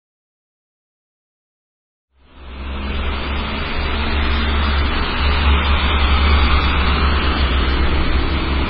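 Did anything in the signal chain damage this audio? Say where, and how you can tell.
Yes, at the codec stage. The sound has nothing above 5.4 kHz for the whole clip, and its texture is heavily watery and swirly, which fits a very low MP3 bitrate around 16 kbps. This is likely MP3 compression. It cut the treble and zeroed weak frequency lines.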